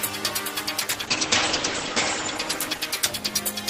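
From 0.8 s on, a call bitrate drop starves the encoder of bits, so sound turns rough and muffled; spectrogram energy above 8 kHz vanishes.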